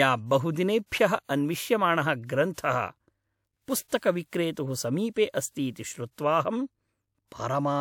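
Pre-echo precedes sharp onsets at 0.86, 1.24, 2.53, 3.88, 4.52 and 5.71 s. Each time, transform-codec quantisation noise sized for the loud attack spills into the quiet 42 to 57 ms before it, heard as a brief hiss that smears the attack.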